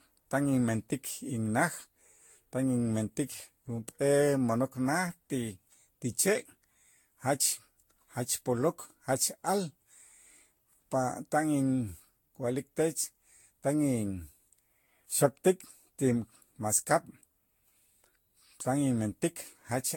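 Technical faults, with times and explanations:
Throughout: generation loss. The speech was likely re-encoded with Vorbis around seven times, each pass requantising on a shifted frame grid, so noise and spectral holes accumulate. It sounds swirly, smeared and hollow beyond what a rate near 70 kbit/s implies, with blurred attacks.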